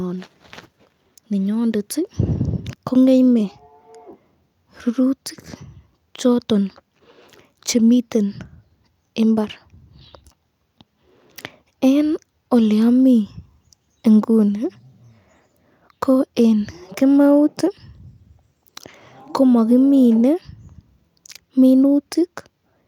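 No technical faults are audible anywhere in the recording.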